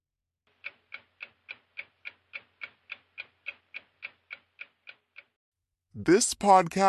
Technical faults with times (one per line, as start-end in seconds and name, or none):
0.00-6.88 wrong sample rate